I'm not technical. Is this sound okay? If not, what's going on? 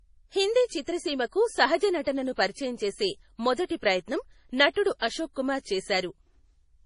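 No. MP3 compression damage runs through the whole clip: the speech sounds watery and swirly, and nothing comes through above 10.5 kHz, so it's dull. The likely cause is heavy MP3 squeezing, where the encoder throws away treble and faint detail to save space.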